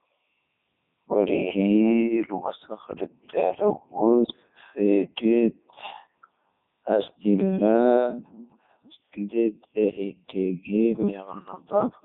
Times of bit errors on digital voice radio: 4.24-4.36

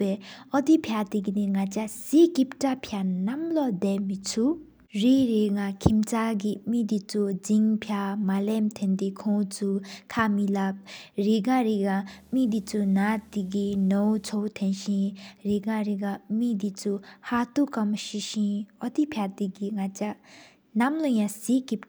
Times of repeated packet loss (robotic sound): none

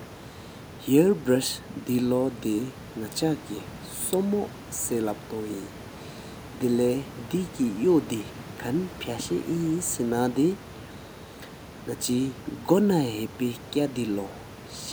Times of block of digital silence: none

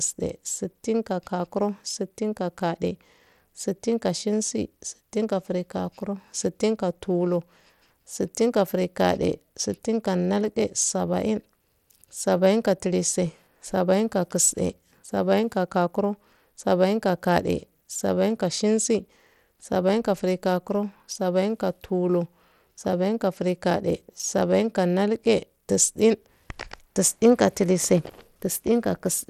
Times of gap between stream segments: none

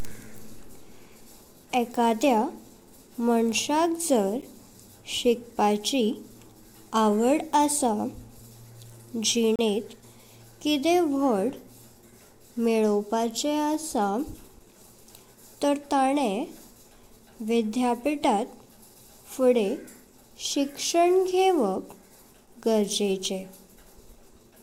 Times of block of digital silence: 4.42, 9.56-9.59

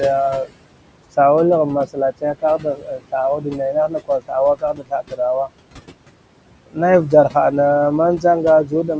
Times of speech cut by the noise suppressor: 0.45-0.57, 1.86-3.13, 3.38-5.20, 8.64-8.89

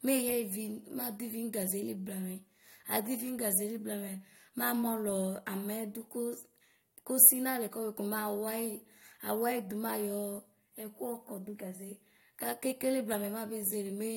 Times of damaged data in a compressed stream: none

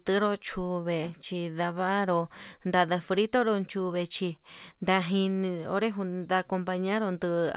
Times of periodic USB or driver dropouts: none

